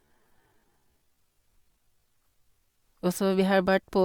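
From 0 to 2.82 s the speech drags at unchanged pitch, a time-stretched section likely slowed to about 0.58× speed.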